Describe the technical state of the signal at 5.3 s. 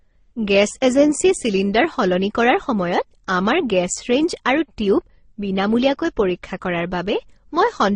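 At 5.3 s the speech carries the marks of transcoding between lossy codecs, and this runs through the whole clip rather than being a local event. Nothing is heard above about 9.7 kHz. The sound carries one codec's artefacts re-encoded by another, the different artefacts heard together. The likely chain is MP3 at 32 kbit/s followed by Opus at 24 kbit/s. The second encoder spends bits on the first one's damage and adds its own.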